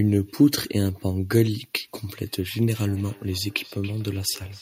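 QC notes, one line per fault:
2.74 to 4.62 s, feedback echo between two devices: from 2.74 s to the end, the speech returns as a thin, ringing copy about a third of a second behind the original, peaking about 24 dB below the speech. A second device in the same room is playing this call aloud and the microphone picks it up again. Each device's echo canceller removes only its own playback, so the other device's output passes through.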